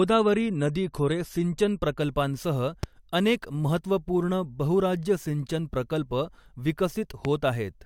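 Adaptive stream starting at a low bitrate, 0 to 2.0 s: the opening two seconds of speech sound dull, with nothing above 14 kHz and more obvious coding artefacts. The player began on a cheap version of the stream to start quickly, and the sound points to roughly 48 kbit/s AAC. At 2.0 s it switched to a richer one, likely around 96 kbit/s, and the treble returns at once with no gap.

Loud pop, 2.83 to 2.86 s: a single sharp pop, about 10 dB above the speech, sits on top of the sound while the speech carries on beneath it. A sudden voltage pulse, likely from a switch, static discharge or a driver glitch, entered the signal path and was shaped by the circuits after it.

Loud pop, 7.25 to 7.27 s: a second single pop of the same kind, stronger at about 15 dB above the speech, again with the speech continuing underneath.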